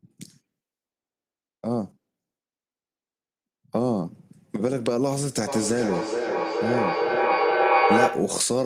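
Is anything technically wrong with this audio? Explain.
Yes. From 5.47 to 8.5 s there is feedback echo between two devices. Another device in the room replays the call, and this microphone recaptures it. Each phrase returns roughly every 0.4 s, thinner and ringing. The repeats build to about 4 dB above the speech.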